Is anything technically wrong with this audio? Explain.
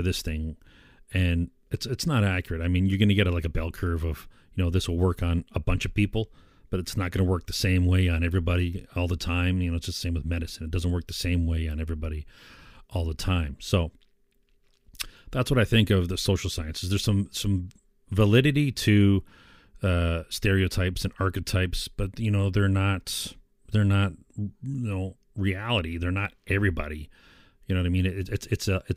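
No, nothing technically wrong can be heard in this speech recording, and the signal stays intact and steady throughout.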